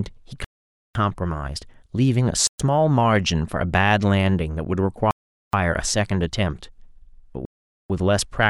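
The speech drops to dead silence four times: at 0.45 to 0.95 s, 2.47 to 2.60 s, 5.11 to 5.53 s and 7.45 to 7.90 s. Each time the speech then picks up again. This is likely a Bluetooth stall, where delayed packets left the headphone buffer empty until resent data arrived.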